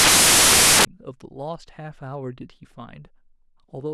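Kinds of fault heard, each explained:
Samples built from the wrong bytes: from 0.0 to 0.85 s the speech is replaced by loud, harsh broadband noise. The bytes of each sample have been misassembled, so rapidly changing low-order bits land in the high-order position and dominate the value. A spectrogram shows a dense wash across all frequencies. The waveform is a thick block of large values in place of speech envelopes.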